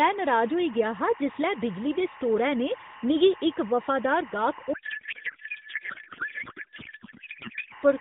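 A steady chirping warble sits behind the speech from start to finish, roughly 20 dB below it, flicking between two pitches around 1 kHz and 2 kHz. This is timecode bleed: linear timecode running at 24 frames per second has leaked in from a neighbouring track or cable, and its square-wave code is heard as that two-tone twitter. The speech itself is narrowband, cut off above 4 kHz and lightly coloured by the AMR-NB mobile codec. From 4.74 s to 7.73 s it gives way to garbled noise and warble that barely follows the speech. That is a codec payload misread: the sender packed its AMR frames in octet-aligned form, but the receiver read them as bandwidth-efficient. Because every field landed in the wrong place, the decoder turned valid-looking frames into nonsense until the formats agreed again.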